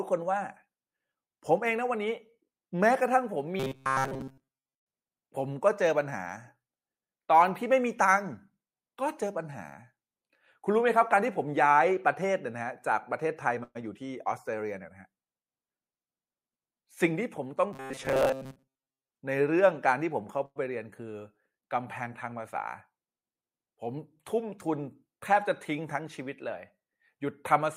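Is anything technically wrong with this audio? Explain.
Yes. From 3.60 to 4.89 s and from 17.73 to 19.11 s the speech turns into a rigid metallic buzz at 133 Hz, robotic sound likely from repeated short buffers: a roughly 7.5 ms chunk replays while most incoming audio is skipped.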